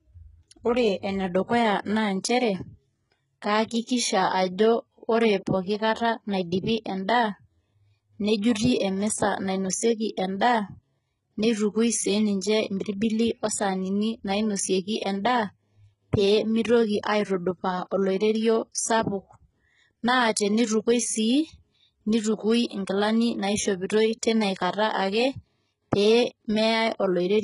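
The whole recording has most likely passed through HE-AAC compression at a very low bitrate, something in the region of 12 kbps. The codec keeps only the lower spectrum and synthesises the treble by copying lower bands upward, so the upper harmonics no longer align with those below. Nothing reaches above 11.1 kHz, and the damage is heavy: sibilants come across gritty and metallic, with a lispy, artificial brightness throughout the speech.

From 22.68 to 22.71 s there is a pre-echo. A sharp onset landed late in a transform block, and the quantisation noise sized for that loud moment spilled back into the quiet stretch before it, about 35 ms ahead. A brief hiss can be heard just before the attack, which itself sounds softened and smeared rather than crisp.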